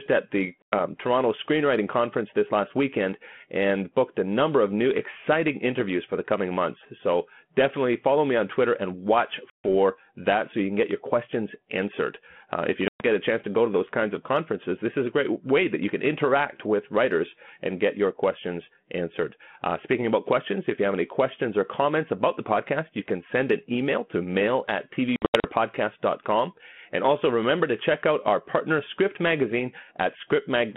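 Packets dropped on this 32 kbit/s G.726 ADPCM call, and the gaps were filled with silence, leaving the receiving decoder's adaptive predictor and step size out of step with the sender's. The result is packet loss on an ADPCM call: abrupt holes in the narrowband speech at 0.62–0.74 s (100 ms), 9.50–9.65 s (140 ms), 12.88–13.02 s (120 ms), and 25.16–25.47 s, where 180 ms goes missing in scattered runs up to 80 ms. After each hole the speech resumes slightly distorted, then settles within tens of milliseconds.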